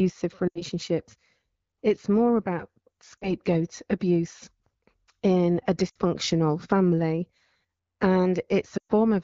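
Brief dropouts break the speech four times: at 0.48 to 0.62 s, at 3.18 to 3.32 s just after "more about", at 5.89 to 5.99 s after "in a", and at 8.77 to 8.92 s, the longest. Each drops quickly to near silence before the sound returns thin. These are lost AMR speech frames, gaps of 80, 40, 60 and 120 ms. The wideband decoder fills each gap by repeating the last good settings at falling level, over otherwise clear HD Voice speech.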